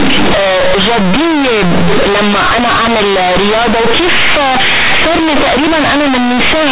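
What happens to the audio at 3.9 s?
At 3.9 s you're hearing companded audio read as linear, which runs through the whole clip. The mu-law telephone bytes are being played as plain 8-bit samples without expansion, so quiet bits blow up as big as loud ones, giving harsh, buzzy distortion and loud noise in the gaps.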